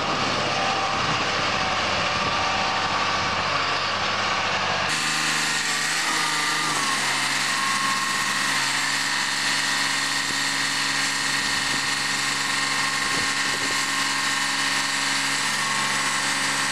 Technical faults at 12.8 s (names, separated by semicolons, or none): section at the wrong speed; compressed frames skipped